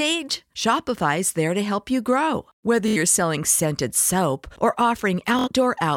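Bluetooth stutter at 2.88 to 2.97 s, and again at 5.39 to 5.48 s, interrupts the speech. Each time, roughly 70 ms of audio failed to arrive, which fits about three lost packets, and the receiver kept replaying its last short slice to fill the gap. The result is a brief buzzing, machine-gun repetition, after which the speech resumes slightly further on, with the missing stretch skipped rather than delayed.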